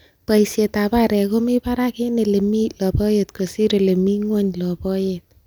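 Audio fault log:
No technical faults can be heard anywhere in the speech recording; the signal stays steady and intact throughout.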